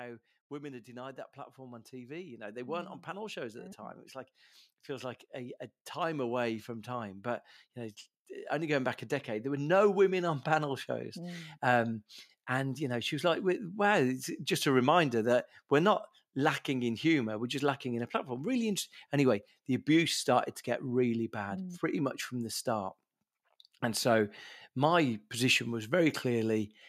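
Speech recording with automatic gain rising from 0.49 s to 11.17 s: the AGC lifts gain about 17 dB, so voice and background swell together.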